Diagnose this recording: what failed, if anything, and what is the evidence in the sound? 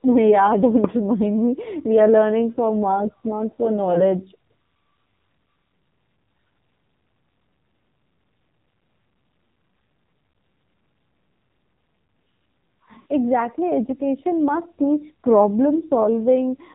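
The whole clip has gone through the codec stage, specifically the AMR narrowband mobile codec. Nothing survives above 4 kHz, so the speech sounds boxed-in and phone-like, and the codec damage is heavy: buzzy, synthetic and a bit metallic. That fits one of the low AMR-NB modes, around 5.9 kbps. At that rate the vocal-tract model only gets a few pulses per subframe to work with, so the excitation sounds coarse rather than natural.

On top of that, there are lost AMR speech frames, which points to the radio or network side. Right after "for marks not for", around 3.94 to 4.06 s, there's a short warbly dip. Another comes at 10.32 to 10.34 s, and a longer smeared stretch runs from 13.00 to 13.06 s. The first two sound like single 20 ms frames and the last like about three. In each case the decoder repeated its last good pitch and vocal-tract settings at reduced gain, so the speech drags slightly and comes back a touch rough.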